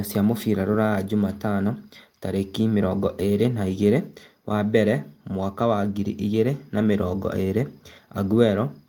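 No technical faults can be heard anywhere in the speech recording.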